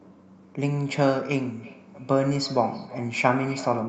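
Feedback echo between two devices runs from 1.59 s to the end. A second device in the room replays the call, the first microphone recaptures it, and its echo canceller cannot remove it. Speech returns roughly every 300 ms, thinner and ringing, peaking about 18 dB below the direct sound.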